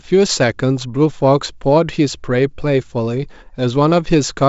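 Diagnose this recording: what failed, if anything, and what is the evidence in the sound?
Nothing failed in this recording, and the sound offers no evidence of any fault.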